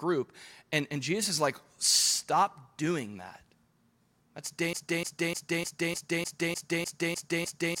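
Speech that falls into a broken-record loop at 4.73 s: a 0.30 s fragment repeats exactly and back to back, 10 times, until the clip ends at 7.8 s, and the audio that should have played there is lost. Unlike an echo, the repeats don't decay or overlap. Each one is identical and butts against the next. A stalled player, encoder or stream that kept resending its last held fragment is the likely cause.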